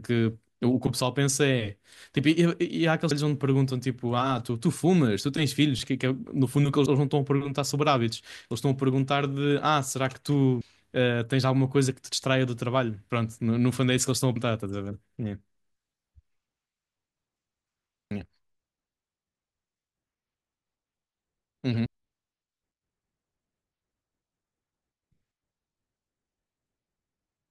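Abrupt skips jump the speech forward at 3.11, 6.86, 10.61, 14.36, 18.11 and 21.86 s, each dropping about a third of a second with no gap of silence. This is likely audio missing between chunks, lost as each 4-second chunk closes and the next opens.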